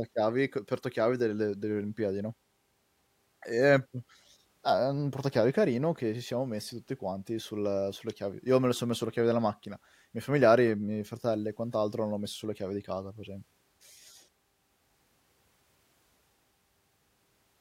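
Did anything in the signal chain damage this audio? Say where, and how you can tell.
No, nothing in this speech recording stood out on listening as damage from any stage of the signal chain.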